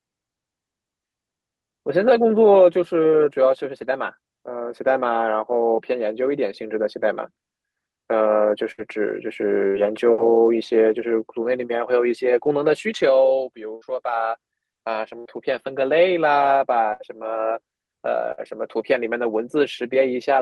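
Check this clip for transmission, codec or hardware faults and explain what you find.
The speech has six bursts of packet loss, at 8.71, 9.67, 13.75, 15.19, 16.93 and 18.32 s. At each, about 60 ms of audio never arrived. The receiver extended the last sound for roughly 60 ms while fading it, producing a brief buzz or hiss, then resumed with that stretch missing.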